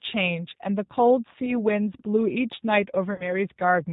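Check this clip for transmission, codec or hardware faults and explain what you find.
Two faults are present: a codec applied to the whole clip and two short dropouts covered by concealment.

Throughout the speech, the sound matches the G.729 codec, which points to the G.729A variant at 8 kbit/s. The codec rebuilds each frame from a vocal tract filter, a pitch predictor and a few pulses, and discards everything above 4 kHz. The damage is plainly audible: the speech is dull, slightly rough and synthetic. Unlike a simple low-pass filter, it also adds a rough, synthetic texture.

VoIP packet loss concealed by the speech codec occurs at 1.46 to 1.55 s and again at 3.14 to 3.32 s. The first event fits one lost 10 ms frame and the second fits about 40 ms of loss. In each gap, the decoder repeated its last pitch and filter at falling gain, so the speech smears into a fading buzzy tone or coloured noise. 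Because each frame builds on the previous one, the weakness lasts after the gap ends. A plain dropout would instead give silence or a click.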